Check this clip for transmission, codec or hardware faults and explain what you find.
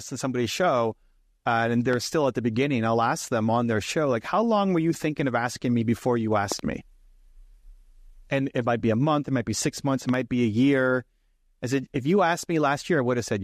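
The recording has three loud pops in the speech. The likely cause is a sudden voltage step or spike from a plug, switch, static discharge or driver glitch entering the signal chain. The following circuitry shapes each spike into a brief pulse that sits on top of the talking, which continues underneath.

The first is a single pop at 1.93 to 1.96 s, between "somebody's show uh and" and "still at the beginning", about 10 dB above the speech. At 6.52 to 6.61 s, just after "asking me before you", two pops come in quick succession, about 15 dB above the speech and the loudest of the three. At 10.09 to 10.16 s, between "be six months it" and "be a year I", there is another double pop about 10 dB above the speech.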